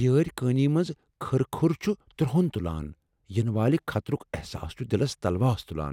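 Nothing goes wrong anywhere in this speech recording, so there's no technical fault to point to at any moment.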